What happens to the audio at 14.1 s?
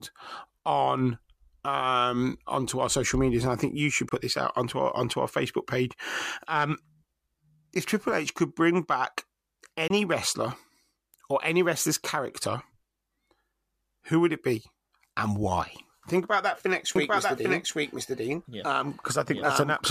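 Nothing goes wrong at 14.1 s; the speech plays through that moment intact, with no dropout, click or other fault.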